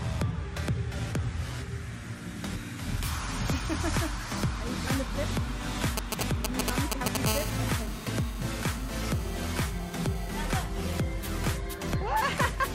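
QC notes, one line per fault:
5.97–7.17 s, GSM signalling bursts: a galloping dit-dit-dit of brief 217 Hz buzzes, somewhat louder than the audio, as a nearby 2G phone's intermittent radio bursts get rectified.
7.26–10.47 s, GSM phone buzz: a steady, raspy 217 Hz buzz rich in harmonics, about 11 dB below the audio, from a nearby 2G phone transmitting in bursts 217 times a second during a call.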